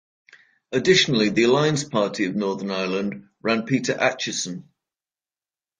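From 0 to 4.3 s the speech sounds dull and smeared, with nothing above 10.1 kHz, then brightens abruptly without a gap. This is an adaptive stream starting at a low bitrate, consistent with roughly 32 kbit/s AAC stepping up to about 96 kbit/s once throughput was measured.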